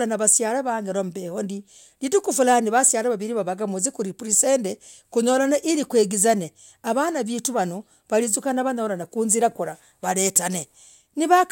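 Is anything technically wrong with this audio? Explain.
No, the speech recording shows no technical faults anywhere in the signal.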